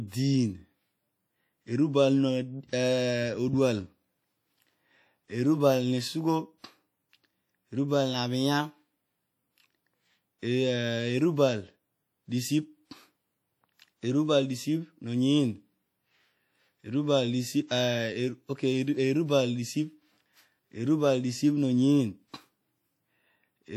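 WMA compression, throughout this speech recording: a ringing, washy texture and a hiss that swells and fades with the signal are plainly audible, likely from a Windows Media Audio transform codec at a rate that fits about 48 kbps, where coarse quantisation smears noise across long blocks. Pre-echo, from 17.68 to 17.70 s: a short hiss runs for about 27 ms ahead of a sharp attack, as the block's quantisation noise spills into the quieter moment before the onset and softens it.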